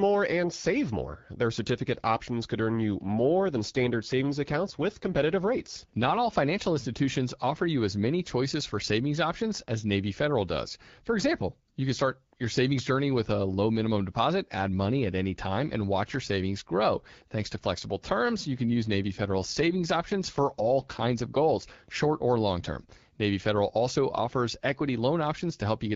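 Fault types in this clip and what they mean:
AMR rate drop: from 3.04 to 6.21 s, after "options could earn you", and from 18.60 to 21.57 s, after "to flexible terms you", the speech turns rougher and more synthetic. The sound fits the network pushing the AMR-WB encoder down from 12.65 to about 8.85 kbit/s so that more bits go to error protection. The band stays the same and there is no gap, and clarity returns before "financial institutions offer you" and "short or long term".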